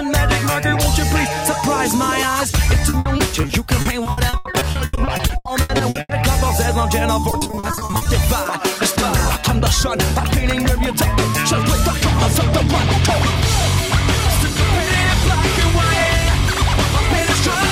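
Repeated packet loss (robotic sound) hits from 2.89 to 6.11 s and again from 7.21 to 8.07 s: dozens of short gaps, up to 80 ms, are patched by stretching the last sound, concealing about a third and then nearly half of each span, leaving choppy audio with pieces missing.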